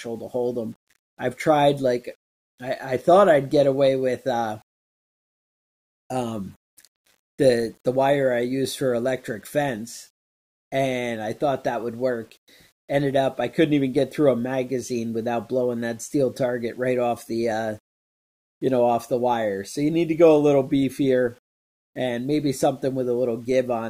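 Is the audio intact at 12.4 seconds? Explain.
No. At 12.4 seconds, as across the whole speech clip, there is grainy distortion that rides on the voice and changes with it, sitting roughly 40 dB below the signal. The likely cause is low bit depth without dither: samples rounded to a coarse grid, which fits about 9-bit resolution, so the error tracks the waveform. Quiet syllables turn gritty. A waveform view shows visible stair-stepping in soft passages, and a spectrogram shows signal-correlated hash rather than a smooth noise floor.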